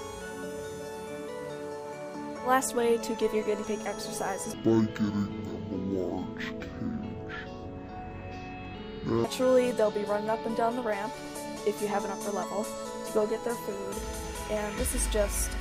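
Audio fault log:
4.54–9.24 s, stereo read as mono: The sound drops to half speed and falls a full octave, 12 semitones down. Here the left and right samples, which alternate in the stream, are taken one after another as a single channel. Each stereo frame then yields two mono samples, so the audio stretches to twice its length and every frequency halves. A fainter mirror image of the sound also appears in the upper half of the spectrum.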